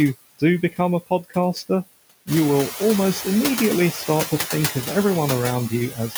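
Speech with noise suppressor artifacts throughout: the suppressor pulls the background down by about 17 dB between phrases and lets it back up under the speech. On a spectrogram the noise floor pumps in step with the speech. The room noise itself rises by about 11 dB at roughly 2.5 s and then sits about 8 dB below the speech. From 5.9 to 6.15 s, speech is cut by the noise suppressor: it mistakes the faint final sounds for noise and drops them by up to about 10 dB over roughly 150 ms, so the ending sounds swallowed. The waveform envelope collapses early there, and the spectrogram shows the speech energy thinning out before the clip ends.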